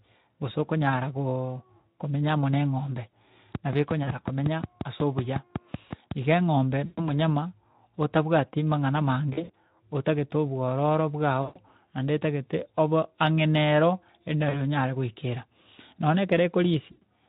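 VoIP packet loss concealed by the speech codec hits at 6.85–7.02 s, 9.33–9.50 s (after "otabwati mang'ana", before "otagete obwororo"), 11.41–11.59 s (after "otagete obwororo"), and 16.91–17.03 s. Each time, the decoder stretches the last pitch and filter into a fading buzz or coloured noise for roughly 100–140 ms, seen as flat, smeared harmonics and a decaying waveform envelope.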